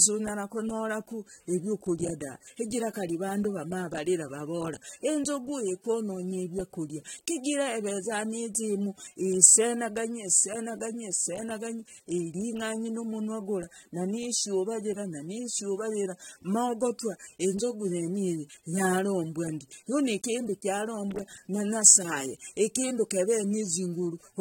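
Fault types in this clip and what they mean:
AAC compression: The whole clip sounds dulled and smeared, with plainly audible codec damage and nothing above 16.6 kHz. This is likely AAC-LC coding at a low rate, one that fits about 32 kbps. At that rate the encoder quantises each block of frequency lines against a hearing model and cannot afford detail everywhere. So it lowers the top cut-off and drops or roughly fills bands it judges less audible.
pre-echo: At about 7.44 s a short hiss arrives just ahead of a sharp attack, spread over about 17 ms, so the onset sounds softened rather than crisp. A transform codec spreads its quantisation noise across a whole block. When a sudden loud event sits late in that block, noise sized for the loud part leaks into the quiet stretch before it and is heard as a premature smear.
loose connector crackle: From 21.11 to 21.36 s an irregular burst of crackling and scratching cuts through the sound, ending just before "na nyasaye ikindu". 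A worn or dirty contact somewhere in the signal chain is rapidly making and breaking as it shifts. That chops the signal on and off many times in quick succession, and the chopping is heard as a ragged spray of small clicks.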